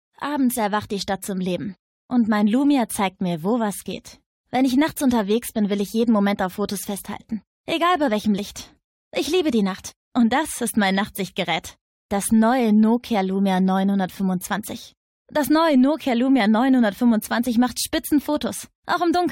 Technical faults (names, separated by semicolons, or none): none